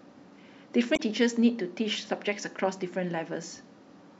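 At 0.93 s, lasting until 1.00 s, the speech breaks into a short glitch caused by damaged data in the compressed stream. Corrupted bytes there leave the decoder unable to read those frames correctly, so it loses sync and produces garbage until it locks onto the next valid frame header.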